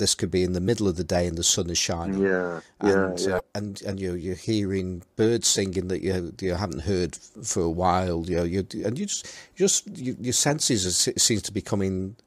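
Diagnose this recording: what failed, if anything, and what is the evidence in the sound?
The codec stage is where this one broke: damaged data in a compressed stream. There's a brief glitch in the speech at 0.64 to 0.68 s and again at 3.36 to 3.40 s, each about 40 ms. Corrupted bytes knocked the decoder out of sync until it found the next frame header.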